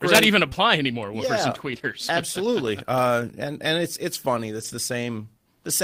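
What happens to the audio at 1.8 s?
The speech turns rough and noisy from 1.71 to 1.84 s. This is a lost packet rebuilt from error correction. The damage fits about three lost packets, and the receiver rebuilt roughly 60 ms of them from the low-bitrate backup copies carried in the packets that followed. That keeps the audio continuous, but at coarser quality.

Inside that stretch, just after "yeah and", from 1.79 to 1.82 s, there is a brief smear. This is short concealed packet loss. About 20 ms of audio arrived too late to use, and the decoder covered 10 ms of the hole by extending the preceding sound before blending back into the real signal.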